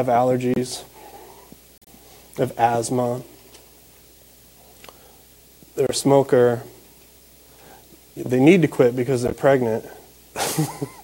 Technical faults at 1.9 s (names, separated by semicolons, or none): corrupt frame decoded